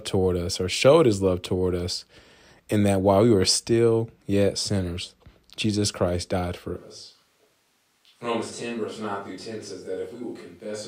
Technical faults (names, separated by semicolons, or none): switch to a distant microphone